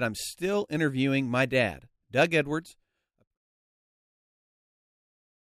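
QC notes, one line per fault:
Nothing stood out on listening to this speech, which eases out with a smooth fade that reaches silence at 3.38 s.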